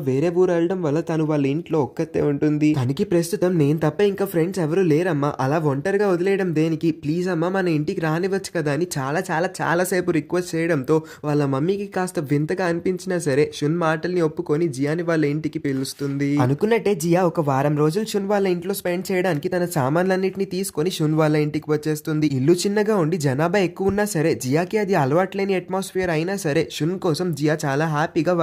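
From 9.17 to 9.76 s and 16.54 to 18.21 s, the sound runs about 5.7% fast and about 96 cents sharp, then snaps back. This is likely a drift correction step.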